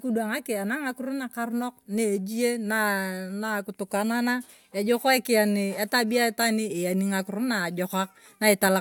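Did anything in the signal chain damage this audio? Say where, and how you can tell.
No, nothing in the signal chain damaged this audio.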